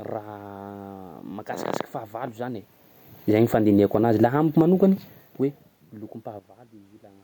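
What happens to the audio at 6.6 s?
At 6.6 s the audio sits inside a sudden gain jump that begins at 6.39 s and lasts to the end: speech and room noise drop together by about 12 dB, likely from digital gain changed without a ramp. The waveform shows a one-sample step down in envelope, and the spectrogram darkens uniformly across all frequencies.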